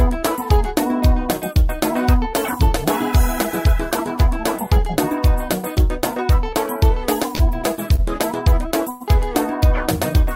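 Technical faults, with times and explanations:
7.35 to 7.41 s and 7.95 to 8.00 s, short stall from a late packet: a packet arrived late and the jitter buffer ran dry, so the receiver stretched the last sound for 40 ms and then 30 ms, holding it slightly too long with a faint buzz or dip before continuing from the same point.
8.90 to 9.02 s, call audio freeze: packets were likely held up in transit and the jitter buffer emptied, so the receiver extended the last sound for about 100 ms as a fading buzz or hiss without dropping to silence, then resumed where it stopped, adding a gap with nothing lost.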